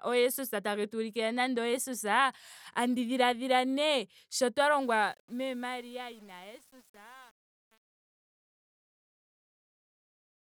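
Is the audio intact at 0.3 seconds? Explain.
Yes, the speech at 0.3 s is intact, with no dropout, click or other fault at that moment.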